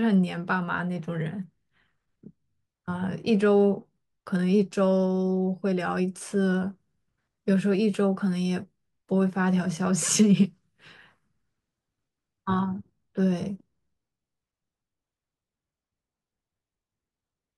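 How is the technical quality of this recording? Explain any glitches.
The technical quality of this recording holds up well, with no glitches to explain.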